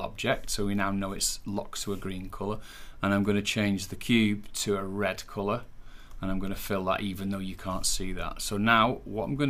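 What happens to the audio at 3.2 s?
Nothing goes wrong at 3.2 s; the audio plays through that moment intact, with no break, click or dropout.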